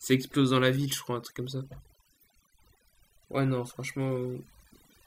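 Overdone noise removal runs throughout this speech clip: an over-aggressive noise reducer mutes frequency bands near its noise estimate, leaving twinkling near-silence.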